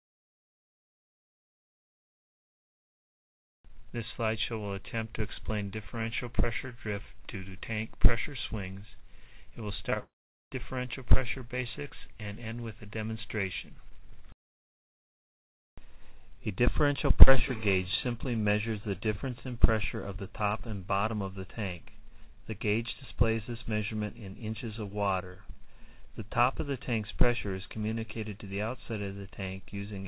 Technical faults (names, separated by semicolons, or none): short concealed packet loss; long network dropout